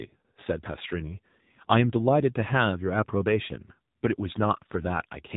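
The speech in this clip has been passed through the AMR narrowband mobile codec (AMR-NB) for its whole length, at a low rate that points to the 7.4 kbps mode. The codec works at 8 kHz sampling, so everything above 4 kHz is gone and the speech sounds boxed-in and telephone-like. It rebuilds each 20 ms frame from a vocal-tract model excited by a few pulses, and at this bit budget that reconstruction is plainly audible as a buzzy, synthetic edge on the speech.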